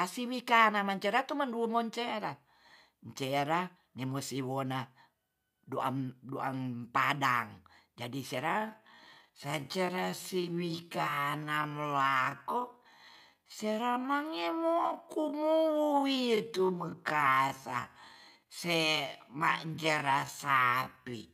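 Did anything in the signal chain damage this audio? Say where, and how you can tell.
Yes. From 8.42 s to the end, the speech runs at roughly half its earlier pace (0.52×) while the pitch stays where it was, which marks a time-stretched section. The slowed stretch drags, as short pieces are repeated to fill the extra length. The likely cause is a stretch applied in editing or storage to fit a target duration. A sample-rate mismatch at playback would also slow the audio, but it would lower the pitch as well.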